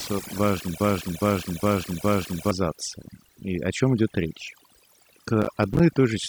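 Speech throughout sits over a near-silent background flecked with twinkling specks, the mark of overdone noise removal: the reduction was set so hard that frequency bands near its noise estimate were cut, taking quieter parts of the voice with them. From 0.80 to 2.51 s a broken-record loop repeats a 412 ms fragment four times back to back, most likely because the player or stream stalled and kept resending its last fragment, so the audio meant for that span is lost. At 5.42 to 5.80 s a gritty burst of crackle tears through the voice as processor overload crackle, a rapid run of tiny silent gaps with hard edges that fits buffers of about 5 ms, with roughly fifteen deadlines missed over the stretch.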